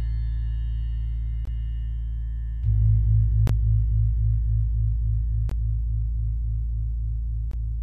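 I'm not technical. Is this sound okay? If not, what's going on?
No, not quite. There are four tiny dropouts, each a gap between chunks: at 1.45–1.47, 3.47–3.49, 5.49–5.51 and 7.51–7.53 seconds. The audio was handled in 2-second pieces, and each join left 20 ms of silence, so the sound cuts out abruptly for a split second and then carries on. Nothing is missing; it's just interrupted at those regular points, which is why it sounds choppy.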